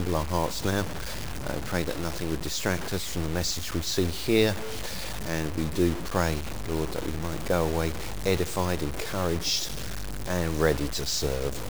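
Grainy, signal-following distortion runs through the whole clip. Its character shifts with the level and content of the sound. Quiet passages sound the roughest, and the softest parts break into a gritty sputter or drop out entirely. The error sits roughly 10 dB below the signal. This is most likely low bit depth without dither: the audio appears truncated to about 5 bits, with no noise added to decorrelate the rounding error.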